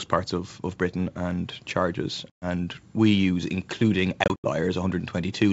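Packet loss on an ADPCM call hits at 2.30–2.45 s, after "and charges": 120 ms drops to silence. At 4.24–4.46 s, after "we use including", gaps recur, longest 80 ms. Each time the decoder's predictor loses track, and sound resumes with brief distortion.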